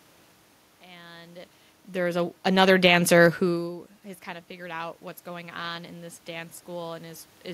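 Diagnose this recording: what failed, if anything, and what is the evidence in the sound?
The automatic gain rising sits in call processing. The input level drops by about 21 dB around 3.5 s, and right after "who has", around 4.25 s, the AGC slowly pushes its gain up by about 4 dB through 7.32 s, so the speech and room noise swell together.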